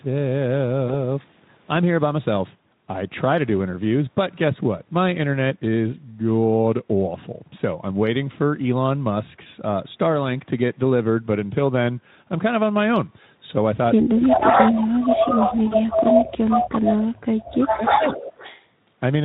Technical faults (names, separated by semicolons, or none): VoIP packet loss concealed by the speech codec; speech suppressed in double talk; echo leak